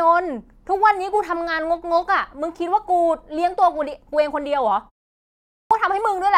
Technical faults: clipped start after a pause

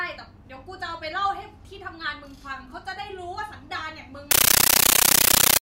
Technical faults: compressed stream played as audio

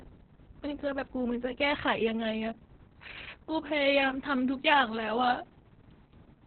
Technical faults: Opus voice compression

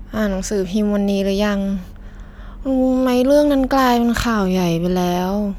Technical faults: none

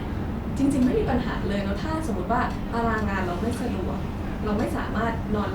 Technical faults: none

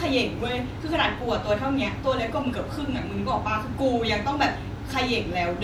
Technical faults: compressed frames skipped

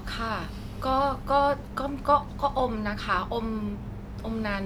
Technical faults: none

